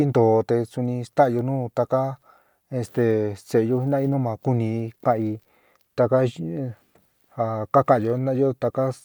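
No technical faults are audible anywhere in this speech recording. Nothing in the audio calls for technical comment.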